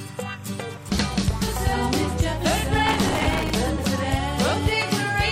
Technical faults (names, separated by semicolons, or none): timecode bleed; damaged data in a compressed stream; processor overload crackle